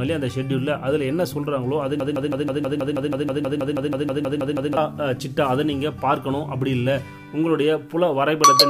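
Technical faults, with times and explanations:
2.00–4.77 s, broken-record loop: a fragment of about 160 ms, 0.16 s, repeats back to back 17 times, identical each pass, so the sound locks into a rapid stutter for nearly three seconds before moving on. The exact repetition points to a stall somewhere in the chain, likely the player, encoder or stream holding its last buffered fragment and resending it. Whatever audio belonged to that stretch is lost rather than delayed.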